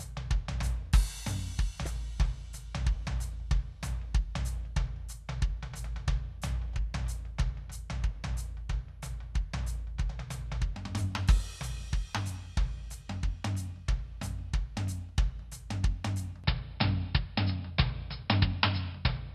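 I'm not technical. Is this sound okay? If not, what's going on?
No. At 1.83 to 1.87 seconds there's a quick glitch in the music from damaged data in a compressed stream, where the player stumbles over bad data. From 16.44 seconds to the end, the music suddenly turns dull and boxy, with nothing above about 5.3 kHz. The likely cause is the input switched to a poorer device, with no gap or volume jump at the change.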